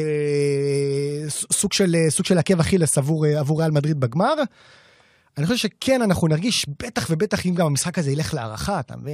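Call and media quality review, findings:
Stutter in speech at 6.54–6.58 s: one short slice of sound plays three times in a row. Repeated frames: a single 23.2 ms compressed frame, which fits a 1024-sample frame at 44.1 kHz, was written or sent twice more, adding 46.4 ms.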